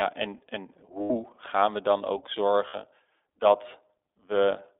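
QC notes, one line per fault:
Throughout: iLBC codec. The speech was squeezed through a narrowband coder working in independent 20 ms frames, consistent with its 15.2 kbps mode. Only about 300 Hz to 3.6 kHz survives, so the voice sounds thin, muffled and plainly rough, with a slightly synthetic, buzzy edge.
1.02–1.11 s and 2.68–2.77 s: lost iLBC frames. Packets went missing for about 80 ms and then 60 ms, which fits four and three 20 ms frames. The decoder filled each gap by repeating the last pitch cycle with added noise, heard as a briefly held, buzzy vowel before the voice snaps back almost at once.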